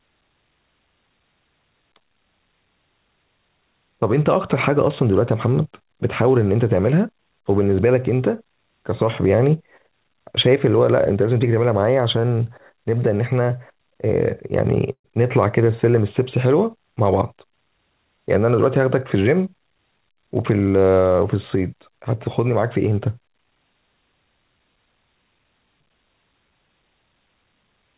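At 14.92 s there's a short call audio freeze, running to about 15.06 s. The sound hangs briefly as a fading buzz or hiss and then about 80 ms of silence before picking up where it left off, so nothing gets lost. That's most likely packets held up in transit, draining the jitter buffer dry.

From 16.96 to 18.22 s you get a jitter buffer speed-up. A backlog in the buffer gets trimmed by cutting tiny pitch-period slices, roughly a tenth of a second in total. The speech runs about 108% fast at unchanged pitch and sounds rushed, all within the 4 kHz band of the G.711 A-law call path.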